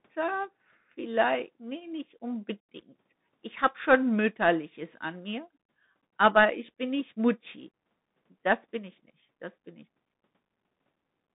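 The speech sounds thin, boxed-in and phone-like for the whole clip, with a granular hiss under the voice, scratchy s sounds and a harsh edge on louder passages. Nothing above about 3.8 kHz survives, and the band sits roughly between 150 Hz and 3.7 kHz. This is the Bluetooth CVSD headset codec. It codes each sample as a single up-or-down step at a 64 kHz rate, which fits a 64 kbps link. Its adaptive step cannot keep up with fast, strong high-frequency movement, so those moments distort.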